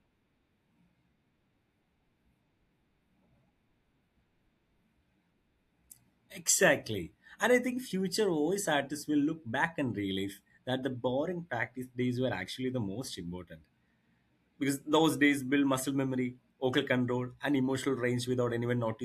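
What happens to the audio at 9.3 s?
At 9.3 s the speech carries the same fault it has for the whole clip: the resampler is restarted on every block. Each 50 ms block is converted from 48 kHz to 44.1 kHz on its own, so its edges lack true neighbouring samples and come out slightly wrong. The result is a 20 Hz ticking buzz that follows the speech and drops away in pauses. A spectrogram shows thin vertical broadband lines every 50 ms. The waveform shows small steps at the block boundaries.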